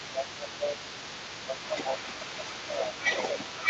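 A short speech recording carries the other side's voice leaking through from start to finish, a second talker sitting only about 5 dB below the main speech, likely because the echo canceller left loudspeaker pickup in the microphone; on a spectrogram it shows as overlapping harmonic stacks. Speech is suppressed in double talk at 0.02–0.77 s, with a dip of around 10 dB, and more lightly, by about 5 dB, at 1.46–2.12 s, 2.31–2.76 s and 3.31–3.68 s. The waveform envelope sags there, and the whole clip stops at the 8 kHz call-band ceiling.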